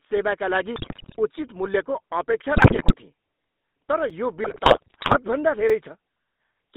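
GSM full-rate codec damage runs through the whole of this speech recording. The band stops at 200 Hz and 3.7 kHz, and a buzzy, gravelly roughness points to the 13 kbps full-rate coder, which rebuilds the voice from a vocal-tract filter driven by sparse, regularly spaced pulses. GSM bit errors break the voice into squawks, pops and gargling from 0.76 to 1.17 s, from 2.56 to 2.96 s and from 4.44 to 5.17 s. Corrupted bits reaching the decoder throw off its filter, pitch and gain values frame by frame, warping the spectrum and the level. A block of digital silence cuts in at 4.10 s for about 5 ms, which fits a 256-sample block, and again at 5.70 s for 4 ms. Each block is short enough to be heard as a tick or dip rather than a gap, and the sound cuts out abruptly and comes back with no fade.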